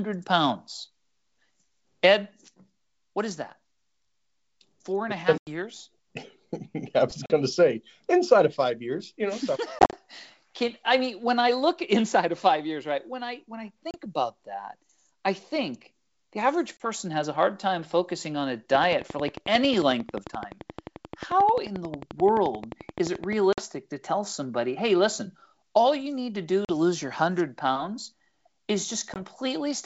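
Packet loss on an ADPCM call first strikes at 5.38 s, just after "and a", cutting 90 ms to hard-edged silence. The decoder's adaptive predictor and step size lose track of the sender's, so the sound resumes slightly distorted before settling. Further losses follow at 7.26 s (40 ms), 9.79 s (100 ms scattered across 140 ms, no gap longer than 40 ms), 13.91 s (30 ms, between "I when I" and "about that I think") and 16.77 s (30 ms).

A train of clicks runs from 18.75 s, after "time focusing on a", to 23.34 s, before "to tell somebody hey". Evenly spaced, same-shaped pulses at 11.4 per second, about 5 dB above the speech, tick through the sound and its pauses. The cause is likely interference or a faulty connection.

Packet loss recurs at 23.53 s (50 ms), 26.65 s (40 ms) and 29.14 s (20 ms), each gap followed by the same short mistracking.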